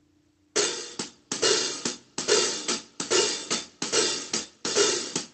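No technical faults can be heard anywhere in the audio. It reaches the ear through a working WebRTC call path, with the coding texture of a call codec and a top end that stops at 8 kHz, which fits Opus running at around 32 kbps.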